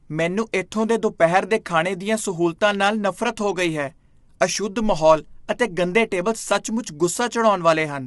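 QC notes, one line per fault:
Throughout: low-delay AAC compression. The speech sounds rough and grainy, with a noisy fill between the pitch harmonics and nothing above about 11.6 kHz, so the top band is dull and cut off. The likely cause is AAC-ELD, the low-delay coder used for calls. Its short frames resolve harmonics poorly and spend more bits per second, and the level of damage fits a low rate of around 32 kbps.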